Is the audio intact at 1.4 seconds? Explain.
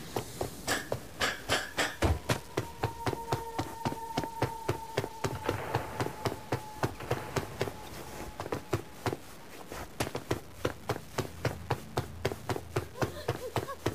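No. At 1.4 seconds, as across the whole clip, there is low bit depth without dither. The grain tracks the sound, sitting only about 20 dB below it. Quiet moments turn gritty or sputter. It likely comes from undithered truncation to around 7 bits.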